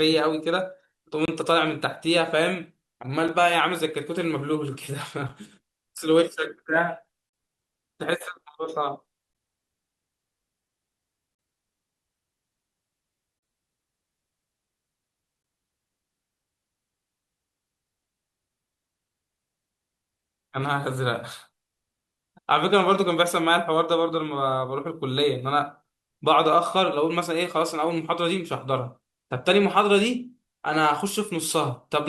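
A gap between stream segments breaks this speech clip at 1.25–1.28, 3.28, 5.29, 7.29–7.33, 9.33, 11.35–11.39, 13.39–13.43 and 15.43 s. Adjacent segments' timestamps fall short of each other, and the player fills each gap with hard-edged silence of 6 to 41 ms. These holes recur every 2 s, which fits 2-second segments.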